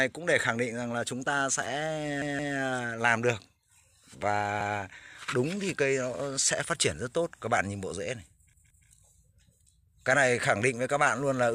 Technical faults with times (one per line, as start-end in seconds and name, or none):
2.22-2.56 repeated buffer
4.61-4.78 repeated buffer
8.53-8.87 repeated buffer